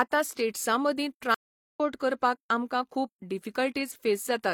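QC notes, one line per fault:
1.34–1.80 s, stream reconnect: after "स्टेट्सां मदीं" the connection drops, leaving 0.41 s of silence while the player reconnects and restarts its decoder mid-stream. It resumes at "करपाक आमकां खूब" roughly a fifth of a second further on, skipping that speech.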